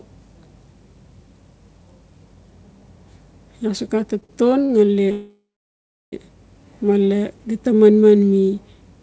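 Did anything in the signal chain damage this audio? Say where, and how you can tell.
Yes, and it's all at the network and jitter-buffer stage. Around 4.20 to 4.31 s you get two back-to-back short stalls from a late packet, one stretching the sound by about 23 ms and then another 48 ms, and a third at 4.65 to 4.71 s adds about 44 ms. Each time the buffer ran dry, the receiver held the last bit of sound until the packet turned up, so nothing is lost. You just hear a smeared, slightly buzzy hold.

The bigger one is a call audio freeze from 5.11 to 6.14 s. The sound hangs on as a fading buzz, then goes silent for about 700 ms, and after roughly a second it picks up exactly where it stopped. That's likely packets held up in transit while the jitter buffer sat empty, so the playout just paused rather than dropping anything. The call path itself comes through with nothing above 8 kHz, which fits a G.722 codec.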